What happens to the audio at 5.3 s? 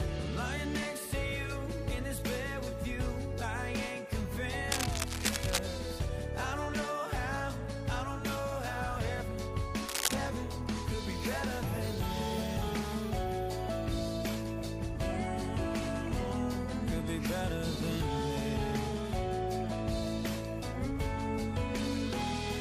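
A worn cable, connector or control being moved is the likely cause: its contact resistance jumps around rapidly. From 4.72 to 5.59 s this produces cable scratch noise, dense uneven bursts of scratching and rustling roughly as loud as the sound itself.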